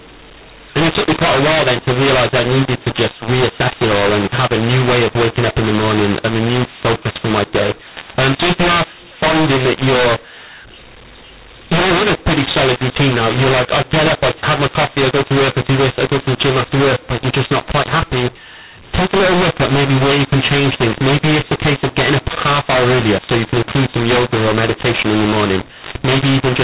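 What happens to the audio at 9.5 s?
At 9.5 s the speech carries the mu-law and A-law mixed up fault, present for the whole clip. Samples written as A-law are decoded as mu-law, so levels are scrambled: harsh, grainy distortion, with pauses filled by noise rather than silence, which plain clipping wouldn't cause.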